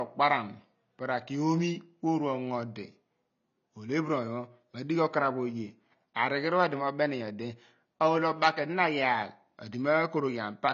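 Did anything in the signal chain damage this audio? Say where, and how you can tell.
Yes, at the codec stage: the speech is cut off at 7.3 kHz throughout, with smeared, fizzy sibilants from coarse quantisation, likely AAC compression near 24 kbps.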